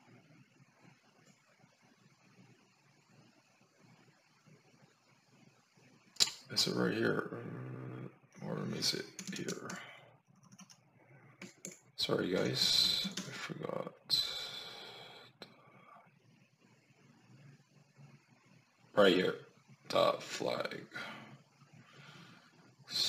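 No technical faults can be heard anywhere in the clip.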